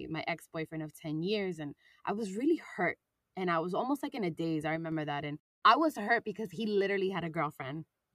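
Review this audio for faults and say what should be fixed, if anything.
A sudden gain jump runs from 4.76 to 4.92 s. The digital gain was likely switched from one sample to the next with no ramp, dropping the level by about 4 dB. The speech and its background noise fall together for that stretch, an audible step rather than a natural fade. To prevent it, apply every gain change through a short smoothing ramp instead of writing the new value directly.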